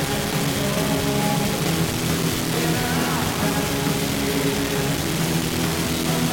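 The audio was likely reduced to about 3 bits by rounding without dither, so grainy, signal-following distortion nearly as loud as the sound persists throughout.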